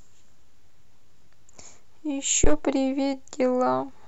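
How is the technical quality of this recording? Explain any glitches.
The recording has one clear technical fault: a phantom power thump at 2.44–2.60 s in the speech. Switching a supply on a live input sends a voltage step through the coupling capacitors, producing a deep thud that peaks at about -8 dBFS and dies away with a decay of roughly 35 ms. On a waveform it shows as a sudden large offset swing settling back; a spectrogram shows a bright vertical smear concentrated at the lowest frequencies.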